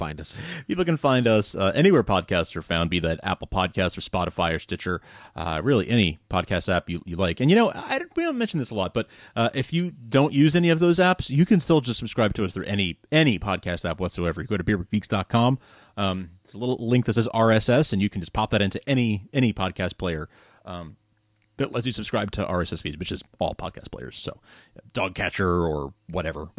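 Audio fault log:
No faults can be heard in this speech recording. There is nothing here to log.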